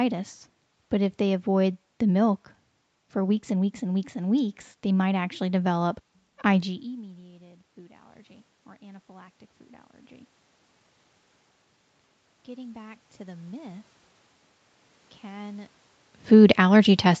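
Automatic gain rising three times: after the talker moves away near 6.5 s, the gain control climbs about 4 dB over 6.64–9.4 s, just before "food allergy", then about 3 dB over 12.45–13.92 s and again from 15.22 s to the end. Voice and room noise swell together.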